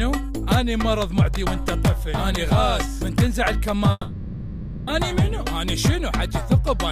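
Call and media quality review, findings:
Audio drops out 3.91–4.90 s: last sound stretched into fading buzz for about 0.96 s, then roughly 20 ms silence. Likely long network dropout, receiver concealment. Unlike a brief packet-loss glitch, the gap spans about a second and playback resumes with that content missing.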